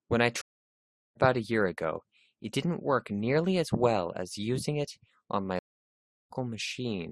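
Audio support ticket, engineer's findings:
Stream reconnect at 0.41–1.16 s. Connection dropped, and the player reopened the stream with a fresh decoder mid-stream. Speech cuts to silence for about 0.74 s, then resumes roughly 0.4 s further on, so that stretch is skipped rather than delayed.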